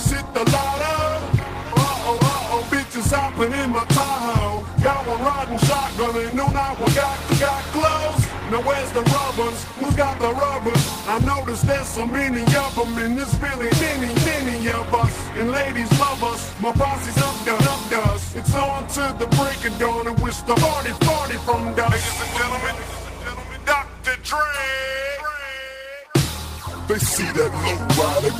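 Nothing is technically wrong with this audio.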